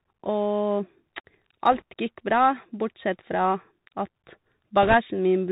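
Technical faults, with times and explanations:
Throughout: Bluetooth CVSD headset codec. Narrowband sound with nothing above 4 kHz, scratchy s sounds, overload distortion on loud peaks and granular hiss, consistent with 64 kbps one-bit delta coding.
1.72–1.82 s and 4.82–4.94 s: bit errors on a Bluetooth voice link. Brief rushing crackle without sharp clicks, heavier in the second burst, where the error rate is roughly 4% against about 1.5%.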